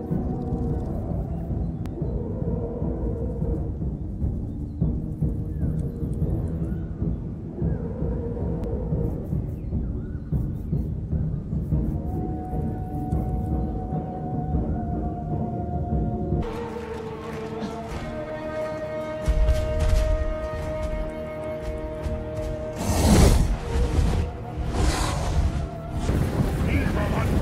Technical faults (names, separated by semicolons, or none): dropped buffer (overrun)